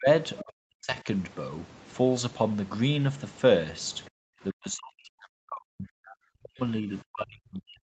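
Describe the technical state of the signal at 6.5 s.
At 6.5 s the speech is ducked, by up to about 40 dB at the deepest, part of a dip from 4.51 to 6.62 s. This is likely speech suppressed in double talk: the echo canceller attenuated the talker along with the echo. It sounds like the talker's voice being turned down.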